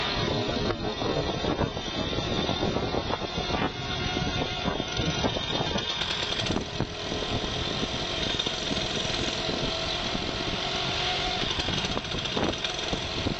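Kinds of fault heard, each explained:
Adaptive stream starting at a low bitrate: the player opened on a cheap version, so until 6.0 s nothing exceeds 7.3 kHz, then quality jumps up gaplessly.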